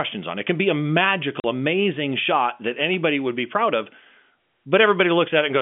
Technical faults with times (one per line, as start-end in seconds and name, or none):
1.40-1.44 packet loss filled with silence